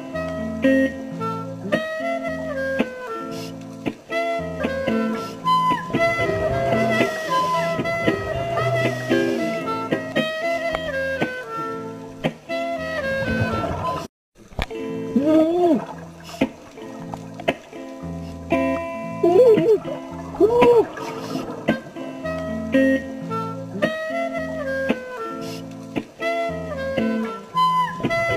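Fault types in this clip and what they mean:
Doubled audio track: from 4.60 s to 10.12 s a second full-band copy of the sound runs about two seconds behind the original, roughly 5 dB quieter, with no decay or room colouring of its own. It starts and stops abruptly at those points rather than fading. The likely cause is the same signal reaching the mix a second time through a slower capture path, or an edit that left two out-of-step copies overlapping.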